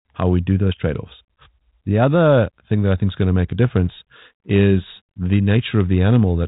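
No technical faults turn up anywhere in the speech. The G.726 ADPCM path at 32 kbit/s shows itself only as a top end that stops at about 4 kHz and a light grain that rises and falls with the speech.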